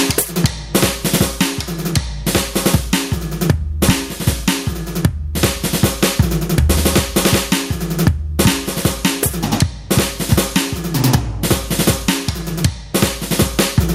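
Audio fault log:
Throughout: gain pumping. The level in this music swings by around 15 dB, so everything sounds squashed. That's likely input gain set way too hot with a fast limiter clamping down.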